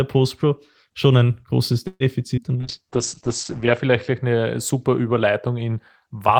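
Speech with four network faults. A call audio freeze at 1.87–2.03 s, just after "schon ein großes", was likely caused by packets held up in transit until the jitter buffer ran dry. The receiver stretches the last sound into a fading buzz ending in about 40 ms of silence, then resumes with nothing lost but about 128 ms of added delay. A skip ahead at 2.36–2.40 s, also after "schon ein großes", occurs when a stretch of audio is discarded, so playback jumps forward past roughly 70 ms of speech with almost no gap. A call bitrate drop from 2.56 to 4.27 s forces the Opus encoder down from 32 kbps to 9 kbps, bottoming out for about 1.2 s, with the audio bandwidth narrowed from 20 kHz to 8 kHz. The voice turns muffled and coarse until the rate recovers. Overlapping it, a jitter buffer slow-down from 2.57 to 2.88 s rebuilds reserve by repeating pitch periods, adding 40 ms, so the speech runs at about 90% speed with unchanged pitch and sounds drawn out.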